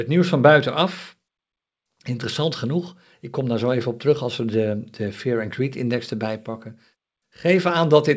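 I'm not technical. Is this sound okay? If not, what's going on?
Yes, nothing wrong can be heard in this speech.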